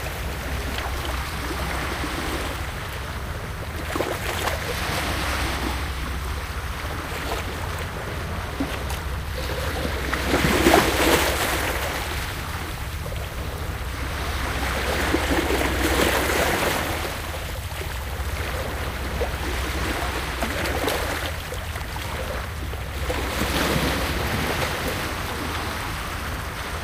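Nothing here trips any alarm, so there's no fault in these sounds worth pointing out.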